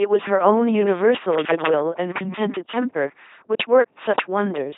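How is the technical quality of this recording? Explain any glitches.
Poor: the speech is heavily degraded throughout by LPC-10 vocoder coding. Each moment is resynthesised from a buzz or hiss through a short filter, giving a mechanical, robotic voice, consistent with 2.4 kbit/s coding. A spectrogram shows flat-topped harmonic stacks, noisy smears, and nothing above 3.8 kHz.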